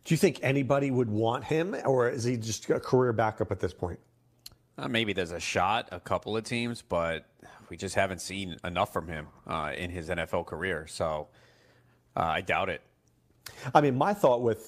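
No technical faults are audible anywhere in the speech recording.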